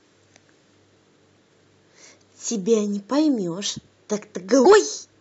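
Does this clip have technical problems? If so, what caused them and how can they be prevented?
Yes. Damaged data in a compressed stream appears at 1.32 to 1.37 s and again at 4.61 to 4.67 s, each a brief glitch of about 50 ms breaking into the speech. Bytes in the encoded file were corrupted there, so the decoder misread those frames, lost sync and hunted for the next valid frame header before playback recovered. Prevention: carry or store the file over a checksummed, error-corrected path and verify its integrity before decoding.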